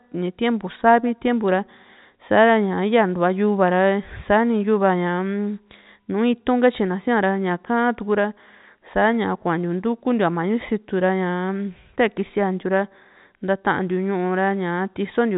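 The speech has no audible technical faults, and it has come through a WebRTC call path whose band limit at 4 kHz, with nothing above it, fits G.711 mu-law telephone coding at 64 kbps.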